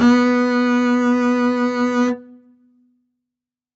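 Throughout the music, the level pumps and flutters, with held tones and decaying tails sinking while attacks punch through, a swing of roughly 15 dB. This is a speech noise suppressor applied to music, which reads sustained tones and ambience as noise and repeatedly pulls them down.

From 2.15 to 2.94 s, the sound sags, dropping by as much as about 12 dB over roughly 700 ms before recovering. This is sound cut by the noise suppressor: it judged this sound to be noise and attenuated it harder than the surrounding music. Above all this, the top end stops at 8 kHz, as expected from the call path's bandwidth.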